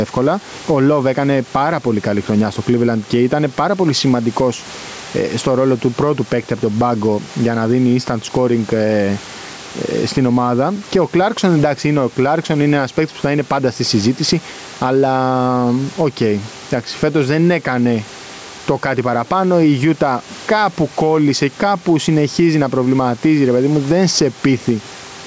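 Gain pumping runs through the whole of this speech recording, with the level swinging by around 10 dB. Loud and quiet passages sit unnaturally close together, giving a squashed quality. The likely cause is input gain set far too high, with a fast limiter or compressor clamping down on each loud sound. The call's microphone processing also leaves nothing above 8 kHz.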